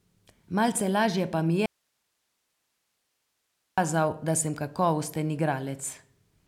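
At 1.66 s the speech cuts off abruptly, leaving only a thin bed of hiss roughly 50 dB below the signal, and it snaps back in mid-flow at 3.78 s, about 2.12 s later. The break is a hard edge, not a pause or fade. This is an audio dropout to a faint residue: the wanted signal was likely lost upstream while the path after the break stayed live and carried only its own noise floor.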